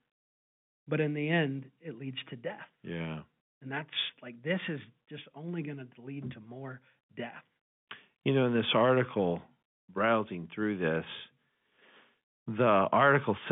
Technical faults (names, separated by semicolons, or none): none